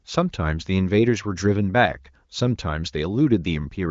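No faults are audible; the speech carries the band-limited character of AMR wideband (HD Voice) coding, with nothing above about 7.6 kHz and the fuller sound of one of the codec's higher rates.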